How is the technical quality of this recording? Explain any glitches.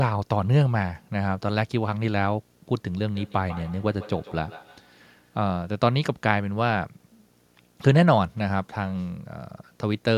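The recording has two problems: a steady video or display buzz running under the whole thing, and a stretch of feedback echo between two devices partway through.

The buzz is there from start to finish, a 60 Hz hum-like drone with a fizzy hash riding above it. A screen or video cable is coupling into the audio path, and 60 Hz is the picture's field rate, which is why the buzz sits exactly there. It's quiet, roughly 40 dB below the speech.

From 3.15 to 5.47 s there's feedback echo between two devices. The speech comes back at a regular interval of roughly 150 ms, and each return sounds thinner and more ringy than the last. The loudest repeats are about 20 dB below the speech. This happens when two devices in the same room are on one call. One plays what the other's microphone sent, and that microphone picks it up again. Each device's echo canceller only removes its own playback, so nothing stops the loop.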